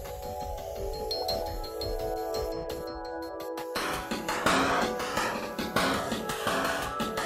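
At 5.42 to 5.49 s, a short run of compressed frames was delivered twice, so the decoder plays the same 64 ms block a second time. That repeated-frames fault sounds like a brief stutter and stretches the audio by 64 ms, a length that fits two frames.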